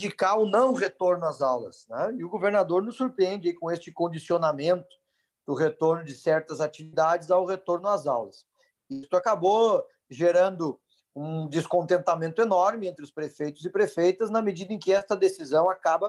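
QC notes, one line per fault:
6.83–6.95 s and 8.93–9.05 s, burst of packet loss: in each, a run of packets arrived too late or not at all, so about a tenth of a second of audio is gone (roughly 90 and 100 ms filled). The receiver stretches the last sound into a held buzz or hiss that fades as the gap goes on, then playback jumps ahead. The audible decay and skipped material set it apart from a brief concealed loss.
14.99–15.03 s, short concealed packet loss: only about 20 ms failed to reach the decoder, and the receiver patched it by extending the preceding sound, pitched or noise-like, before crossfading back into the real signal. The result is a quick smear or wobble rather than a fading buzz, which distinguishes it from the longer bursts earlier.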